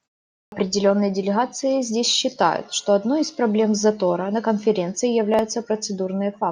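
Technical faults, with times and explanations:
0.44–0.52 s, clipped start after a pause: The clip opens with 0.44 s of silence. The output device has gone to sleep and is still waking when sound resumes. About 81 ms is swallowed. So "делегации здесь считают что" starts abruptly, missing its first sounds.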